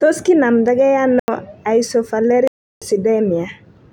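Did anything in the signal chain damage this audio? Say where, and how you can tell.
Yes. The speech cuts dead to digital silence twice, with no fade. Just after "kinamda ge" there is a hole of about 85 ms, from 1.20 to 1.28 s. A longer hole of about 341 ms runs from 2.48 to 2.82 s. These are blocks of digital silence from the driver or buffer stage, where output blocks were zeroed instead of filled in time. Their lengths fit 4096-sample and 16384-sample blocks at 48 kHz.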